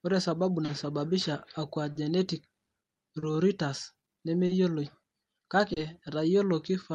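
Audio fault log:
Throughout: clock drift between sender and receiver. The sending clock runs roughly 2 percent slow relative to the receiver, so the jitter buffer keeps draining faster than it is refilled. The receiver has to cover the shortfall again and again, and those corrections are heard as small timing hiccups that recur across the whole clip. The Opus call path underneath, with its roughly 12 kHz bandwidth, carries on as normal.
0.65, 1.92, 3.19, 4.46 and 5.73 s: short stall from a late packet. At each of these points the buffer runs dry for about 50 ms, because a packet arrives after its playout time. The receiver stretches the last sound, filling about 30 ms, and then resumes exactly where it paused, so nothing is lost. Each time, the playback delay grows by about 30 ms. The result is a held sound with a faint buzz or dip. The stalls return at a steady interval of about 1.27 s.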